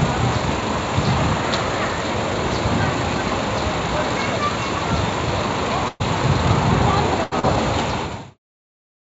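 At 5.88 to 6.03 s and again at 7.24 to 7.34 s, a burst of packet loss cuts out stretches of the sound, about 120 ms and 80 ms respectively. The receiver stretched the last audio into a fading buzz or hiss before resuming further on, with a brief 10 ms silence in the first gap. On a spectrogram, each gap shows smeared, repeating bands that dim before the real texture returns. In the waveform, the envelope is flat and decaying.

From 7.39 to 7.54 s comes a short concealed packet loss. About 40 ms never arrived and was patched by extrapolating the preceding sound and blending it back, which is heard as a quick smear or wobble. A spectrogram shows a small smudged patch.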